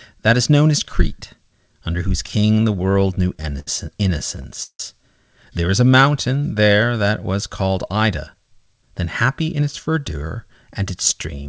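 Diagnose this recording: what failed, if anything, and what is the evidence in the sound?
Repeated stalls (stutter) occur in the network and jitter-buffer stage at 2.28 to 3.68 s, just after "under whose", with fourteen hitches of up to 69 ms. They recur at 4.19 to 4.80 s, where five longer holds reach 161 ms. Late packets drained the buffer, and the receiver stretched the last sound to bridge each wait. Nothing is lost, but the flow drags.

A jitter buffer speed-up in the same stage runs from 7.96 to 10.23 s, right after "there that was called". The backlog had grown too deep, so the receiver trimmed pitch-period slices repeatedly, cutting about a fifth of a second. The passage plays 8% fast at unchanged pitch, over a call path with nothing above 8 kHz.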